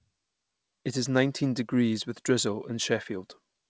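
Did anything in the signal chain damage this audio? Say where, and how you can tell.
No, nothing damaged this audio.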